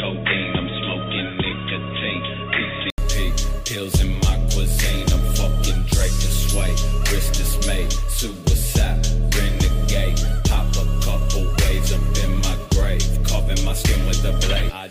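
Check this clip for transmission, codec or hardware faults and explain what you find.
One fault is present, at the start of the clip. From 0.0 to 2.98 s the sound is dull and boxy, with nothing above 3.8 kHz, a level a few decibels lower, and a faint background noise sitting roughly 40 dB under the signal. An 80 ms silence at 2.98 s separates it from the clearer sound that follows. This points to an input switched to a poorer device. The likely cause is a narrow-band microphone or headset call profile handing over to the normal input.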